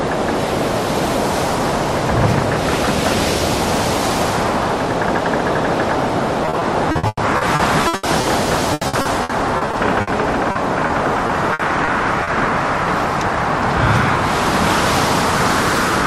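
From 6.45 to 8.25 s, repeated packet loss (robotic sound) sets in: stretches of audio keep failing to arrive, and each hole is bridged by extending the preceding sound. About 31% of the span is patched, with holes up to 120 ms, so the audio turns choppy. On a spectrogram, harmonics freeze into flat smeared bands. The waveform shows repeating chunks in place of natural variation. The same happens from 8.73 to 10.09 s, with about 28% patched and holes up to 80 ms.

Short concealed packet loss follows at 10.51–10.57 s (40 ms filled) and 10.87–10.91 s (20 ms). Each brief gap is filled by continuing the last sound and then blended back, heard as a quick smear or wobble. A spectrogram shows a thin blurred column where detail briefly vanishes.

Repeated packet loss returns from 11.27 to 12.29 s, milder at about 14% patched, with holes up to 60 ms.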